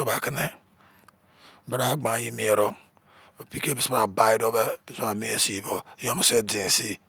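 Speech recording with no technical faults audible anywhere in the clip.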